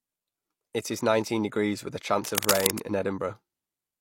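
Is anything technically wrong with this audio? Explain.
Yes. From 2.20 to 2.79 s, right after "nineteen degrees with a", there's cable scratch noise: rough, uneven rustling about as loud as the speech, likely a worn cable or connector being jostled.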